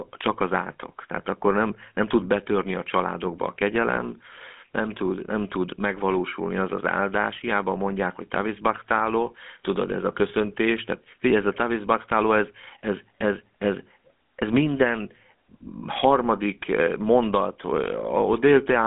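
From start to finish the speech has the GSM full-rate codec sound, a plainly audible buzzy, gravelly roughness, which fits the old 13 kbps full-rate scheme. The codec models the vocal tract as a filter and excites it with a coarse, regularly spaced pulse train rather than the real waveform, so the voice comes out grainy. The band is narrow too: roughly 150 Hz to 3.5 kHz, with nothing above 3.8 kHz.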